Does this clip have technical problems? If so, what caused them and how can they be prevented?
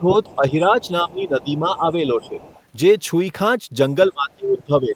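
Yes. Speech suppressed in double talk appears from 0.0 to 2.46 s, with dips of roughly 10 dB, and from 4.09 to 4.96 s, where it drops by around 25 dB. The likely cause is an echo canceller that turned the talker down while both sides spoke at once. On a waveform the envelope sags. Better double-talk detection, or a headset, prevents it.

The other side's voice is leaking through at 0.26–1.45 s, 2.22–2.62 s and 4.53–4.62 s, faint at roughly 25 to 30 dB below the speech. This is likely loudspeaker pickup that the echo canceller left behind. On a spectrogram it shows as a second, weaker harmonic pattern. Lower playback volume or headphones would prevent it.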